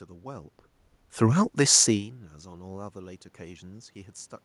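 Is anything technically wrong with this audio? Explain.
No, nothing stood out on listening; the background sound of the room and the shifts in level near the start and again about two seconds in, where the talker moves relative to the microphone, belong to the recording itself.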